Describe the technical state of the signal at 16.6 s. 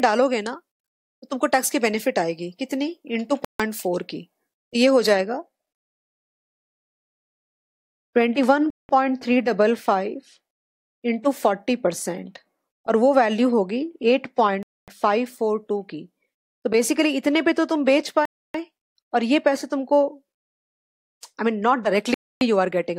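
At 16.6 s the audio is intact, with no dropout, distortion, glitch or other technical fault in the signal.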